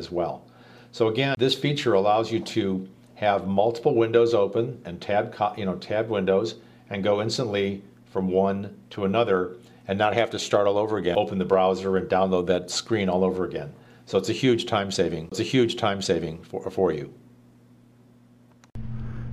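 Three CD skips occur. The first runs from 1.35 to 1.37 s. The second falls at 11.15 s. The third runs from 15.30 to 15.32 s. Each time the laser jumps off its track onto a different turn of the disc's spiral. Playback mutes for a moment, about 20 ms for the first and third and only a few milliseconds for the second. Then it resumes from a different place. Each skip is heard as a tick and an abrupt jump in the sound.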